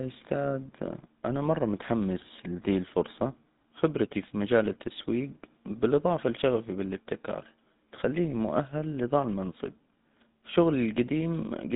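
From start to finish the speech carries the sound of the GSM full-rate codec: a buzzy, gravelly roughness from a coarse pulse-train excitation and nothing above 4 kHz, which fits a 13 kbps GSM link. Unlike a plain telephone band-limit, this grain is laid over the voice itself.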